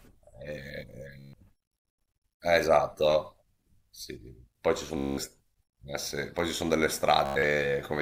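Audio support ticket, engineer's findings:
Bluetooth stutter at 1.19–1.34 s, 4.97–5.18 s and 7.26–7.43 s. Short buffer slices looping into a buzz. Receiver replaying its last buffer over late or lost packets. Roughly 145, 203 and 145 ms of speech skipped; third gap broken up, longest run about 100 ms.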